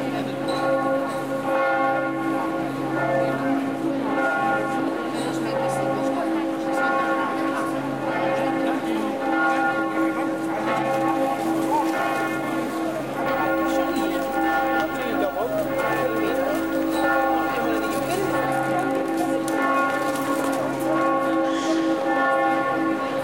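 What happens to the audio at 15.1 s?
Video or display buzz runs from 13.26 s to 18.47 s, so it is present at 15.1 s. Interference from a screen or its video cable is getting into the audio path, adding a 50 Hz buzz at the picture's field rate with a gritty hash above it, plus a very high whine near 15.6 kHz from the line scan. The interference sits roughly 20 dB below the sound itself.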